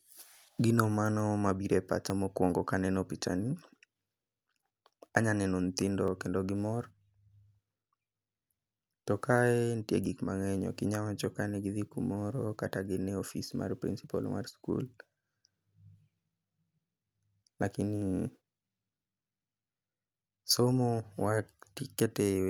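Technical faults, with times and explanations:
2.1, 6.08, 10.06, 14.04, 18.02 and 22.0 s: audio missing between chunks. At each of these points the speech jumps forward by a tiny sliver, around 20 ms, and the two sides butt straight together with no gap of silence, so you hear a small skip rather than a pause. The skips land at a steady spacing of about 4 s, which is the giveaway. The likely cause is a recorder or processor handling the audio in 4 s chunks and dropping a bit at each handover.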